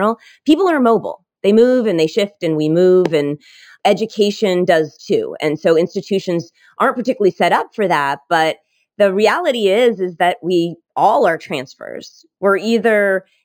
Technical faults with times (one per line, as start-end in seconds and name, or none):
0.00-13.45 imaging from linear upsampling